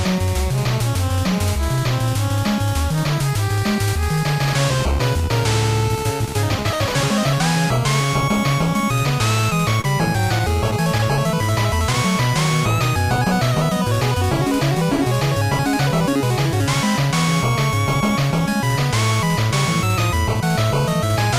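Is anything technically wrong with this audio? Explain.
Yes. Between 9.41 and 12.33 s there are scattered short gaps: around ten lost packets, each up to about 30 ms, patched by repeating preceding sound, causing ticks and smears, visible as brief flat-textured stretches or repeated waveform cycles.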